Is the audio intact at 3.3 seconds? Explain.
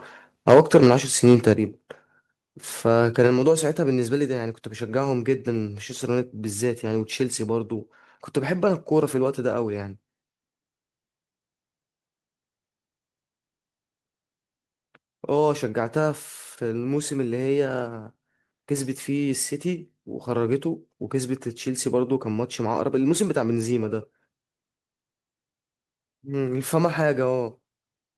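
No. A microphone volume stepped down at 3.27 s, likely because the call software judged the input too hot and cut the device's gain in one step, so the speech and the background behind it drop suddenly by about 4 dB together and stay lower.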